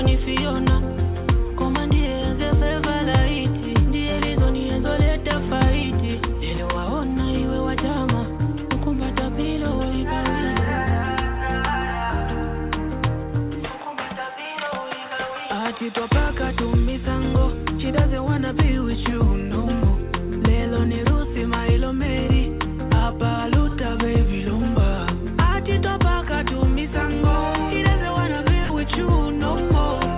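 A burst of packet loss hits the audio at 28.64 s and lasts until 28.72 s. The receiver stretches the last sound for about 56 ms and lets it fade. About 60 ms of audio is lost, and playback resumes past the gap. The sound stops at 4 kHz throughout, which fits a narrowband call codec on the line.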